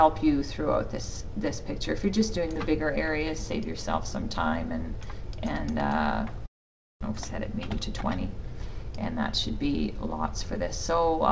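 From 6.46 to 7.05 s the sound fades out and goes silent, with about 0.4 s missing afterwards. A long network dropout is the likely cause. From 7.12 to 9.57 s a jitter buffer speed-up trims pitch periods. The audio runs at 106% speed, losing about 150 ms, with unchanged pitch.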